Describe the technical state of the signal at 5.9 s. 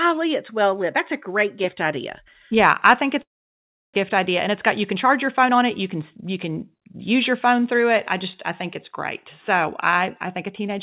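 At 5.9 s the speech is inside a jitter buffer speed-up running from 4.10 to 8.50 s. The receiver repeatedly trims one or a few pitch periods to drain excess buffered delay, so speech runs about 107% fast at unchanged pitch, sounding hurried. On a waveform, periodic cycles are slightly fewer; spectrogram harmonics stay level, below the call codec's 4 kHz ceiling.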